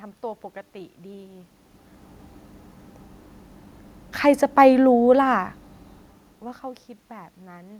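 No technical faults can be heard anywhere in the speech. The room's own background noise sits under the recording throughout, and the level at the microphone shifts around 1 s and again near 6 s, as a talker moving closer or farther away would cause.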